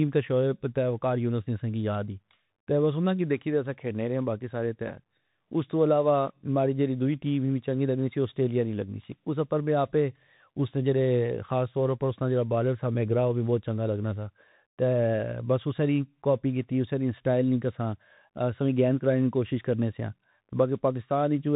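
Bluetooth CVSD headset codec damage runs through the whole clip. Each sample is coded as a single up-or-down bit with an adapting step, which fits a 64 kbps CVSD link, so nothing above 4 kHz survives. Sibilants turn scratchy, loud bright sounds distort, and a granular hiss sits beneath the speech.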